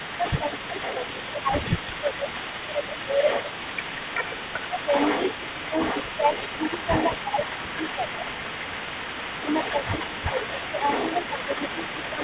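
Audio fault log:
Throughout: echo leak. A delayed copy of the speech trails the talker by 382 ms, sitting around 10 dB below the direct voice and running the full length of the clip. Like the rest of the audio, it is narrowband, with nothing above 4 kHz, which fits a G.711 A-law call path at 64 kbps. The likely cause is a far end on loudspeaker whose echo canceller left residual echo in its microphone signal, which was then sent back.
0.00–0.77 s, 1.32–3.00 s, 4.78–4.93 s, 5.56–8.00 s, 9.42–11.49 s and 12.14–12.20 s: speech suppressed in double talk. The voice briefly dips or thins in short patches, totalling roughly 70 to 500 ms per stretch. Most dips are mild, about 5 dB, but those at 5.56–8.00 s and 12.14 s go deeper, to about 10 dB. The likely cause is the echo canceller mistaking overlapping speech for echo and turning down the near talker along with it.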